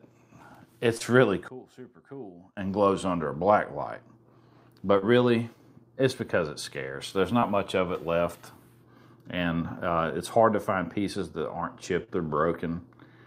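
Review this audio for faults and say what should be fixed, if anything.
Short concealed packet loss at 0.97–1.02, 4.98–5.04, 7.40–7.44 and 12.04–12.10 s: the decoder bridged gaps of roughly 17–41 ms by extending the last sound, so you hear brief smears. A bigger jitter buffer or some redundancy on the link would cover these.

From 1.48 to 2.57 s the sound drops about 20 dB, most likely one channel inverted, so the shared content cancels in the mono sum. Checking channel polarity before downmixing would stop that.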